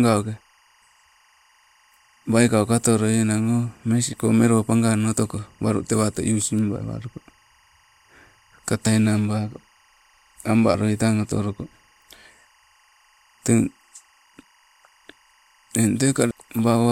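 Throughout the speech, timecode bleed sits about 40 dB below the voice: a chirping warble flipping between roughly 1 and 2 kHz, ticking at 24 frames per second. Linear timecode has leaked in from a neighbouring line. Its rhythmic two-pitch chatter sets it apart from a steady hum or whine.

Compressed frames skipped occurs at 1.49, 8.86, 10.74 and 16.30 s, where the speech lurches ahead by roughly 150, 70, 150 and 300 ms, consistent with whole 26.1 ms frames being dropped by the decoder.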